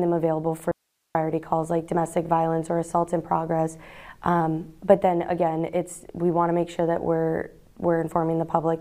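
From 0.72 to 1.15 s the audio drops out to a faint residue for about 434 ms, likely a brief signal loss with the path left live. Only hiss remains, roughly 50 dB down. On a waveform it's a near-flat gap with hard edges, and a spectrogram shows a thin broadband noise band.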